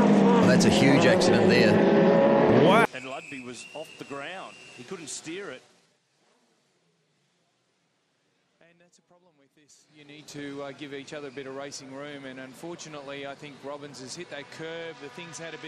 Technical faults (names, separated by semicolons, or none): zipper noise